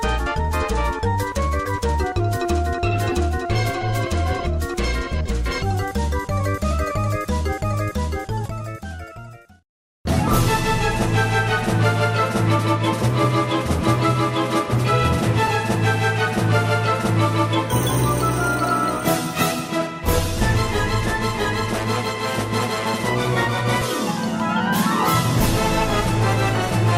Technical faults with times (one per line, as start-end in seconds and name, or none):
1.65-1.70 compressed frames skipped
3.81-3.84 compressed frames skipped
5.25-5.30 compressed frames skipped
8.45-8.50 compressed frames skipped
10.27 compressed frames skipped
13.81 compressed frames skipped
15.47 compressed frames skipped
23.81-23.84 compressed frames skipped